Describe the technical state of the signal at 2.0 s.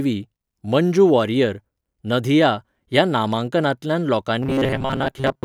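At 2.0 s the speech signal is intact, with no audible fault at that moment.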